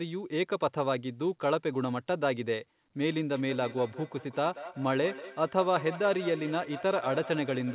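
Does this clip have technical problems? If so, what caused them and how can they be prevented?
Yes. From 3.34 s to the end, feedback echo between two devices: each phrase returns about every 0.2 s, peaking about 14 dB below the speech, as one device replays the other's microphone signal into the room. To prevent it, mute the microphone and speaker on all but one device in the room, or use headphones.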